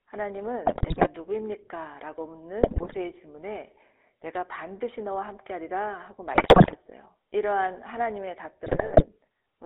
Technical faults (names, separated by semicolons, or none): GSM full-rate codec; GSM bit errors